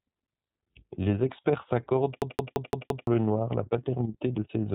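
Throughout the speech, the iLBC codec leaves plainly audible damage. The band stops at about 3.8 kHz, so sibilants and breath lose their top end. Each frame's excitation is coded on its own, without leaning on the previous one. That gives the voice a slightly rough, synthetic grain, which fits the 30 ms, 13.33 kbps mode.

From 2.22 s to 3.07 s, right after "experts s'accordent", a system hang loop takes over. The machine stalled while the sound hardware kept replaying its ring buffer, so one 0.17 s slice repeats exactly five times at about 5.86 Hz. That produces a machine-gun stutter, consistent with an 8192-sample buffer. About a second of the real audio that should have played there is lost.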